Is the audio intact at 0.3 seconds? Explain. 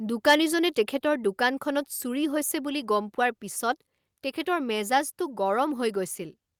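No. From 0.27 to 0.35 s the speech shows microphone overload, most likely because the input gain was set too high, so the signal drove past the converter's ceiling by about 6 dB. The converter cannot represent anything above full scale, so the tops of the loudest waveform peaks are sheared flat, affecting roughly 7 percent of the samples in that span. You hear this as a harsh, crackling distortion on the loudest part of the sound there.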